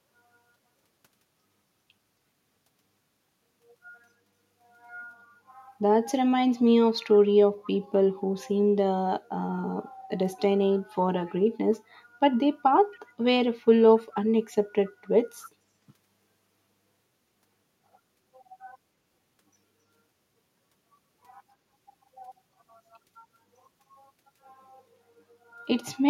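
Speech with a faint echo leak: brief ghost copies trailing 271 ms behind, well down under the voice, at 7.63–7.71, 11.27–11.31, 12.93–12.99, 13.99–14.14, 14.86–14.91 and 15.41–15.50 s, likely a far-end speakerphone's echo canceller letting scraps through.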